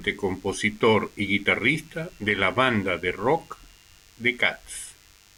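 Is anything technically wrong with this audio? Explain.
Yes. A DECT cordless phone buzz runs throughout the speech. A nearby DECT handset or base transmits a radio burst every 10 ms, and the audio circuitry rectifies it into a steady, thin 100 Hz buzz rich in harmonics, sitting roughly 30 dB below the speech.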